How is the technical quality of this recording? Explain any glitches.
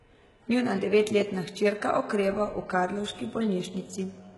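The recording is heavily compressed from start to finish. Throughout, the treble sounds bright but synthetic, with s sounds coming out gritty and lispy and nothing above 11.5 kHz. This is likely HE-AAC compression at a very low bitrate, around 12 kbps. The upper band is rebuilt by copying lower bands upward, so its harmonics don't line up with the real ones. A plain low-pass or bandwidth-limited codec would sound dull instead.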